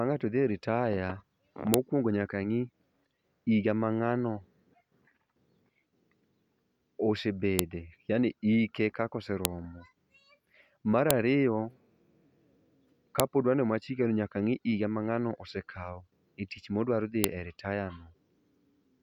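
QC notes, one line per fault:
1.74, 7.59, 9.45, 11.11, 13.20 and 17.24 s (the last just after "osekao e tich modwaro"), file header played as audio: sharp, loud snaps where joined WAV pieces begin, their header bytes decoded as samples. Unlike a dropout click, each lands regardless of the speech and loses nothing.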